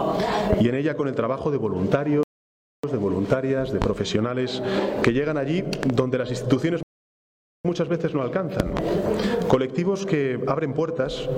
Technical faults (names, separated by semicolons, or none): loud pop; rebuffering stall